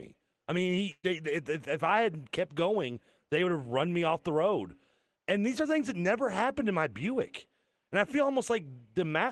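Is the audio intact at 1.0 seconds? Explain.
No. A burst of packet loss runs from 0.91 to 1.06 s: roughly 120 ms of lost audio is concealed by stretching and fading the last sound, then 30 ms of silence, before "if if I had". Unlike a plain dropout, the gap fades instead of cutting off, and speech resumes further on.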